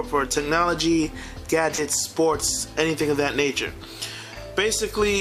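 At 1.75 s and 4.34 s, short concealed packet loss: about 20 ms never arrived, and the receiver extrapolated the preceding sound, leaving a brief smear rather than a silent dropout.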